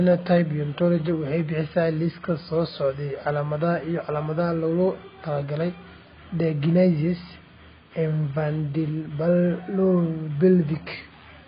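Throughout the speech, nothing is heard above 5 kHz. The top of the spectrum is simply gone, so sibilants lose their edge and the sound turns dull and muffled. The damage is heavy. Sustained sounds warble, and the remaining highs have a fizzy, smeared texture. This is likely AAC compression, AAC-LC at a very low bitrate. A rate around 16 kbps would fit, forcing the encoder to drop high bands and starve the rest of bits.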